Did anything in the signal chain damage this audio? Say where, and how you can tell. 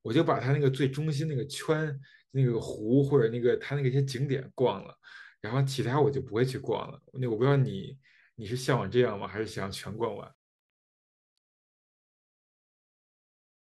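Yes. There is truncation distortion on a fade at the sample-format stage. From 9.78 s to the end at 13.63 s the fade-out turns gritty, worst from 10.72 s. Undithered requantisation consistent with a 10-bit word reduces the quiet tail to coarse square steps.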